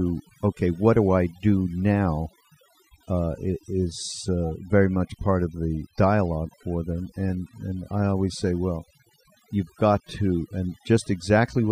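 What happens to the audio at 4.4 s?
At 4.4 s the speech is affected by overdone noise removal, which runs through the entire clip rather than starting there. A noise reducer set too aggressively pulls individual frequency bands down or out whenever they sit close to its noise estimate, taking quieter parts of the voice along. The background drops and breaks up into twinkling specks. Unlike a noise gate, which shuts the whole signal at once, this thins the sound band by band.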